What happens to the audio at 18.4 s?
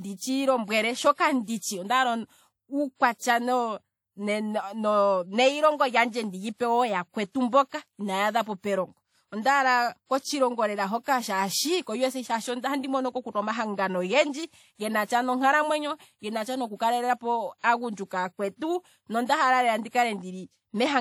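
At 18.4 s the speech carries the same damage heard across the whole clip. It sounds ringing and washy, with a hiss that rises and falls with the speech. Nothing is present above 19.4 kHz. This is likely WMA compression at a low bitrate, fitting about 48 kbps. The transform codec smears quantisation noise over long blocks and zeroes weak detail.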